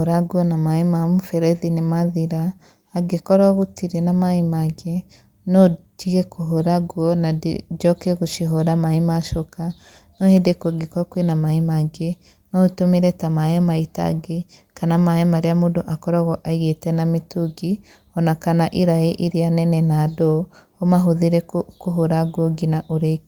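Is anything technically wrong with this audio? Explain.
No, nothing technically wrong stood out on listening to this speech recording.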